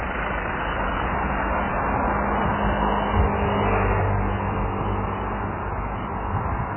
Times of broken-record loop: none

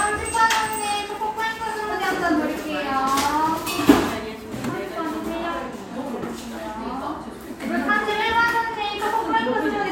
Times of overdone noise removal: none

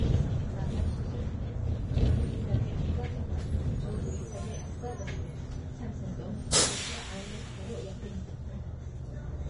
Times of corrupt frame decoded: none

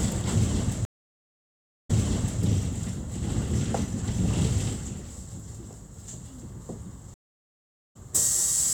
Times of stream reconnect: 0.85-2.41, 7.14-7.96

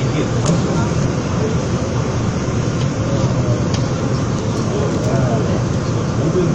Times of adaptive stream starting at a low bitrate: 0.00-4.00

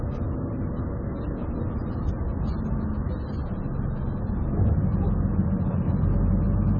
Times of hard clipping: none

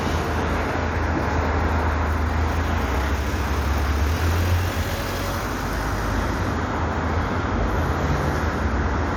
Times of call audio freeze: none

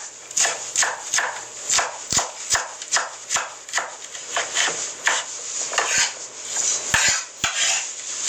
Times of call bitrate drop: none

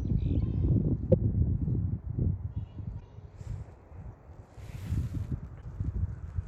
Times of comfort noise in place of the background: none

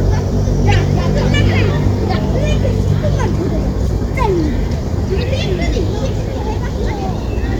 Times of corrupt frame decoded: 0.69-0.74, 2.05, 3.86-3.94, 6.37

